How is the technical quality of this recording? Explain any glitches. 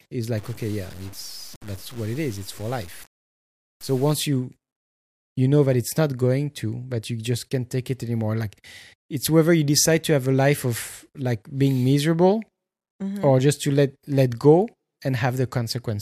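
There's one clear problem, near the start. From about 0.38 to 4.13 s the speech turns grainy and gritty, with quiet stretches sputtering or dropping out. That's low bit depth without dither, likely truncation to something like 7 bits, leaving signal-tracking distortion roughly 25 dB below the speech.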